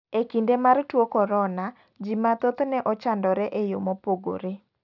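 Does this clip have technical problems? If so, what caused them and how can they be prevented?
Yes: aliasing runs through the whole speech clip. Energy above 6 kHz folds back to false lower frequencies around 35 dB below the signal, making sibilants gritty, which fits a drop to 12 kHz without filtering. A spectrogram shows content crowded hard against 6 kHz with mirrored traces. Apply a steep anti-aliasing low-pass before downsampling.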